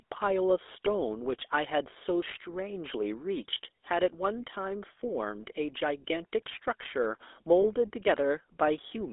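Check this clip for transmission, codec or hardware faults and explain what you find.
Two faults are present in this speech clip.

The GSM full-rate codec affects the whole clip. The sound is confined to about 300 Hz to 3.6 kHz. The codec models the vocal tract and drives it with a coarse pulse excitation. That gives a plainly audible buzzy, gravelly roughness, which fits 13 kbps full-rate coding.

Lost GSM frames occur from 7.62 to 7.67 s. The decoder repeated the last good frame's settings. This is heard as a brief rough, metallic ring in place of the missing sound. Its length fits a single lost 20 ms frame.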